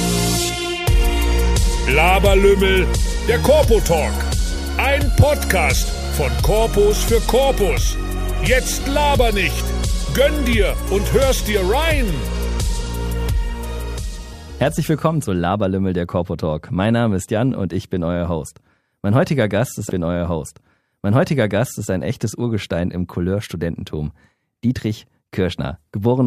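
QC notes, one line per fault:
19.89–21.89 s, stream segment repeated: two seconds of audio play a second time, so the programme steps back and resumes from material already heard, adding 2.0 s to the running time. The player has queued the same segment twice. A small blip marks the jump back at 19.89 s. On a waveform or spectrogram the 2 s block beginning there is an exact copy of the preceding stretch, with a thin vertical discontinuity at the seam.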